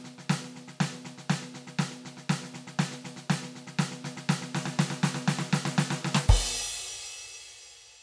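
Nothing goes wrong technically at any point in this music, so there's no fault to flag here.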